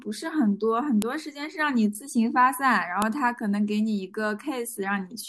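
At 1.02 s and again at 3.02 s a sharp, loud snap cuts into the speech: a file header played as audio. The stream was assembled from pieces about 2 seconds long, and each piece's header bytes were left in and decoded as samples. Unlike a dropout or clipping click, these land at exactly regular 2-second spacing and sound the same whatever the speech is doing.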